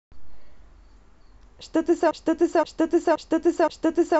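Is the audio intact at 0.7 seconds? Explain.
Yes, the speech at 0.7 s plays through intact, with no dropout, click or distortion at that moment.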